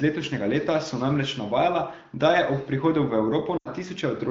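From 3.57 to 3.68 s, lost AMR speech frames: the wideband decoder reuses the last sound, then drops to near silence within two frames, about 80 ms of concealment. A spectrogram shows frozen harmonics sinking into a gap.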